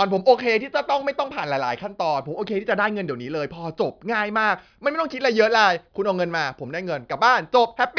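No technical faults can be heard anywhere in this speech recording. There is nothing to place on a timeline, since no event stands out from the rest of the audio.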